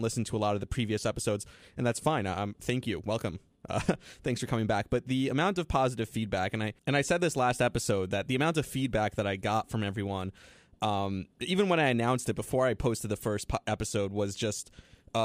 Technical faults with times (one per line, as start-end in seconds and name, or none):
none